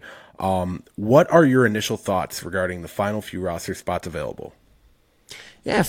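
No technical faults are audible anywhere in the recording.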